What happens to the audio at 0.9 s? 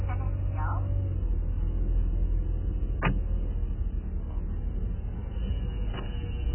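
At 0.9 s the audio has the sound of heavy AAC compression, likely AAC-LC, and it persists from start to finish. Nothing is left above 3.1 kHz, so the sound is dull and muffled. The encoder has too few bits for its hearing model. It drops and blurs frequency detail, leaving gaps and a warbling, fizzy smear on sustained sound. The damage fits a very low bitrate, around 8 kbps.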